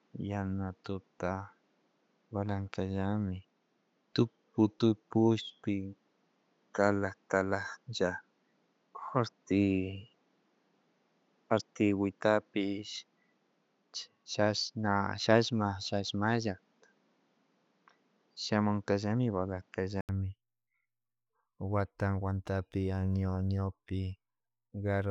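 Input switched to a poorer device: from the start of this speech clip until 20.09 s the sound is band-limited, with nothing above 7.6 kHz, and carries its own noise floor roughly 45 dB below the signal. At 20.09 s an 80 ms silence precedes fuller sound at much the same level, likely a mid-recording change of input device.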